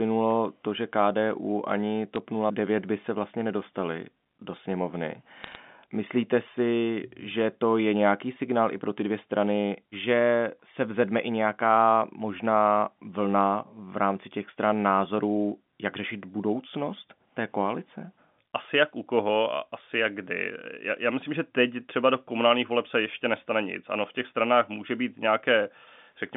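At 2.16 to 2.18 s, and again from 5.44 to 5.56 s just after "vlastně nedostali do sněmovny", there are bit errors on a digital phone line. Scattered bits in the G.711 mu-law stream were flipped, at a rate of a few per thousand. Each flip corrupts a single sample, and hits on the sign or high-order bits become sharp ticks, heard here as brief crackle. Unlike packet loss, the speech underneath carries on intact, with no gap or smeared repeat.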